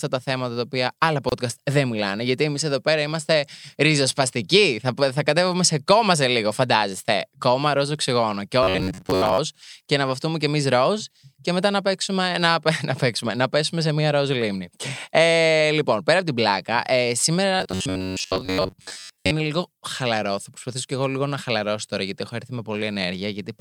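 Separately encoded pieces of this speech recording were joined without trimming each encoder's start delay and end padding, producing a gap at a join of encoded pieces from 1.29 to 1.32 s: about 28 ms of silence with smeared edges, after which the sound carries on where it stopped. New audio likely arrived too seldom, so playback kept repeating a short buffer of about 11 ms while most of the real signal was skipped. The result is robotic sound from repeated short buffers at 8.63 to 9.38 s and 17.56 to 19.31 s: a rigid, metallic buzz near 94 Hz that only roughly follows the speech.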